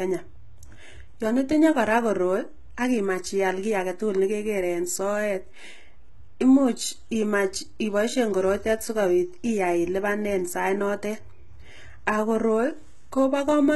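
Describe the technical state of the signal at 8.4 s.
At 8.4 s the speech carries heavy HE-AAC compression damage, present across the whole clip, likely from a very low bitrate around 16 kbps. The treble is rebuilt from copied lower bands, so s sounds turn gritty and metallic. A spectrogram shows blocky, repeated upper-band texture and nothing above 11.8 kHz.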